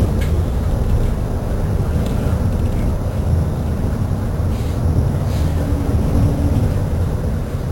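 Imaging from sample-and-hold upsampling runs through the whole clip. The sound was raised from a rate of about 11 kHz to 44.1 kHz by holding each sample for several output samples with no smoothing filter, so mirrored copies of the spectrum sit around every multiple of 11 kHz. The lowest copy fills the 5.5 to 11 kHz band at about 29 dB below the signal. It is heard as a metallic fizz that rises and falls with the sound and moves opposite to its pitch.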